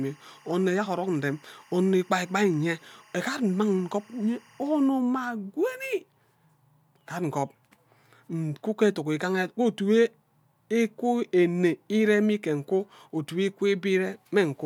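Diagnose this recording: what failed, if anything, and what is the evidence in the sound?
Timecode bleed in the analogue wiring. A chirping warble near 1 and 2 kHz sits about 30 dB under the speech from 0 to 4.88 s. Leaked 24 fps code causes it.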